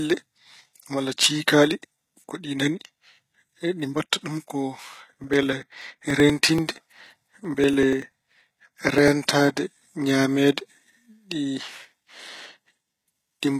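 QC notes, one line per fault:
throughout: HE-AAC compression. The encoder likely coded only the lower spectrum at a very low bitrate, around 20 kbps, and synthesized the treble by copying lower bands upward under a coarse envelope. The damage is plainly audible. The upper range reaches high but is not genuine, so its harmonics don't line up with those below the crossover, and s sounds come out gritty, metallic or lisping. Nothing is present above 14.9 kHz.
5.14–9.08 s: periodic USB or driver dropouts. Starting just after "mbaɗta ɗum ko", something blocked the audio path every 0.096 s, and each time a few milliseconds of signal, roughly 4 ms, were skipped outright rather than filled. That gives about forty evenly spaced ticks over the span, a steady rapid clicking laid over the speech. The splices land only where there is sound, so the ticks drop out in pauses.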